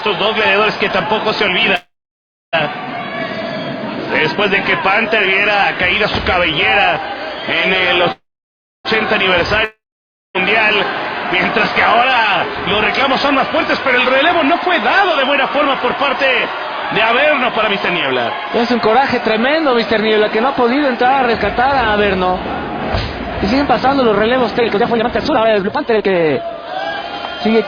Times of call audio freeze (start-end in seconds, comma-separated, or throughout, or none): 1.75-2.55, 8.12-8.87